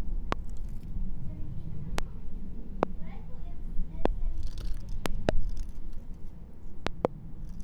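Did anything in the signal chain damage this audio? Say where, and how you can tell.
Yes. Loud pops at 0.32–0.35, 1.98–2.01, 2.83–2.85 and 4.06–4.08 s, and double pops at 5.06–5.31 and 6.87–7.07 s, peak about 20 dB above the sound, which continues underneath. Brief voltage steps, likely from analogue wiring or a switch, are being added.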